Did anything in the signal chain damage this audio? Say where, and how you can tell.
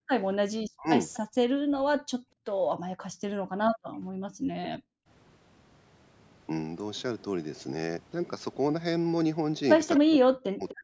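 Yes. The damage sits in the call-processing stage, in the echo canceller, and it shows up three ways.

Background gated by the echo canceller: the room sound drops by about 40 dB from 0.0 to 0.1 s, and again in stretches between 2.22 and 4.33 s, totalling roughly 0.7 s. The canceller pulled the microphone down hard while the loudspeaker was active. A plain noise gate follows the local signal level. These dips instead follow far-end playback and recover as the canceller releases.

Speech suppressed in double talk is the likely cause of the speech dropouts from 0.75 to 1.94 s (about 0.5 s affected, down by around 40 dB), at 4.61 to 4.83 s (around 30 dB), and from 10.0 s to the end (around 40 dB). With both sides talking at once, the canceller turned the near talker down along with the echo. Network loss would instead bring clicks or concealment artefacts. Here the level simply sags while the other side is speaking.

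Echo leak: a delayed copy of the sound appears at 1.13 to 1.18 s, roughly 25 dB below the speech, and from 9.96 to 10.73 s, at around 15 dB below. It lags by 250 ms, likely because the far end's canceller let loudspeaker pickup through. Room reverberation would smear into a continuous decay. This is a distinct repeat at a fixed delay, within a band that stops at 8 kHz.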